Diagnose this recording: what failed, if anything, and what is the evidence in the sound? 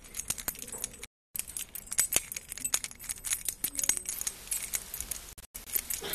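Two separate failures are audible. The first is a digital broadcast dropout at the reception stage. At 1.06 s the sound cuts to silence and returns at 1.35 s, a gap of about 0.29 s. At 5.33 s it breaks again, this time into several short holes spread over about 0.34 s. The longest hole is about 0.1 s, and about 0.19 s is missing in total. The receiver muted while frames were lost or failed their checks. The gap lengths fit frames of roughly 24 ms each. The missing audio is gone, not delayed.

The second is low bit depth with dither, at the sample-format conversion stage. From 4.12 s to the end, a steady, even hiss sits under the sound. It does not pump or crackle, and the sound itself is not distorted. That points to a requantization to about 7 bits with dither added first. Dither turns the rounding error into flat white noise. Here that noise is strong, only about 10 dB below the signal.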